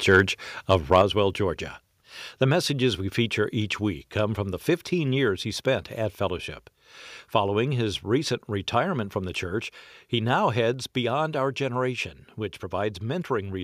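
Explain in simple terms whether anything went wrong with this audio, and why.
The microphone's input was most likely set too high, causing microphone overload: the loudest peaks hit the converter's ceiling and had their tops sliced off. Around 0.13 to 0.21 s and again from 0.71 to 1.02 s, the speech takes on a harsh, crackly edge.

The call software then likely stepped the microphone volume down, lowering the input level in one jump. Right at 1.02 s, straight after the distorted stretch, the speech and background suddenly get noticeably quieter, and at 10.74 s they drop again, by a smaller step.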